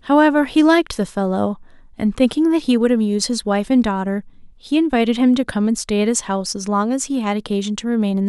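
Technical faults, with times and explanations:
No technical faults are heard in the speech.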